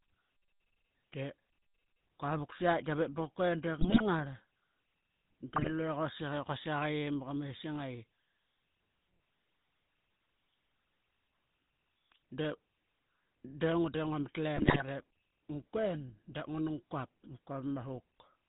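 GSM full-rate codec damage runs through the whole speech clip: the voice is rebuilt from a vocal-tract model excited by sparse, regularly spaced pulses, giving a plainly audible buzzy, gravelly roughness and no content above 4 kHz, consistent with 13 kbps full-rate coding.

GSM bit errors strike at 3.80 to 4.05 s, 5.56 to 5.71 s and 14.56 to 14.83 s. Corrupted filter, pitch and gain values distort the spectrum and level frame by frame, so the voice breaks into squawks, pops and gargling, most severely in the last burst.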